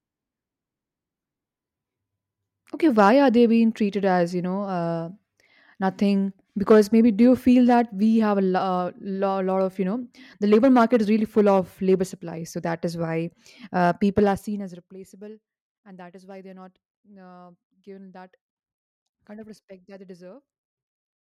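At 14.19 s the level drops by around 20 dB over to 14.98 s, and it comes down in coarse steps, about fifty a second, with no smoothing between them. That's zipper noise: each jump leaves a tiny click, so a fast ticking buzz rides on the speech during the fade.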